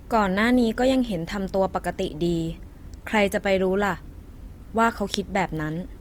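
Across the whole clip, the speech has likely passed through Opus compression in its music (CELT) mode, at a rate fitting about 24 kbps. Short of bits, the encoder fills bands with folded or noise content, so the speech sounds plainly rough and grainy, though it still reaches 20.2 kHz.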